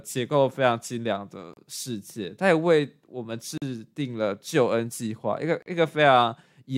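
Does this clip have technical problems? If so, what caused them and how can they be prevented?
Yes. Gaps between stream segments cut the speech at 1.54 to 1.57 s, 3.58 to 3.62 s and 5.62 to 5.66 s. Each hard-edged silence lasts about 36 to 43 ms, recurring roughly every 2 s. Segment timestamps leave small holes, and the player fills them with silence. Prevent it by aligning each segment's timestamps so every segment starts exactly where the previous one ends.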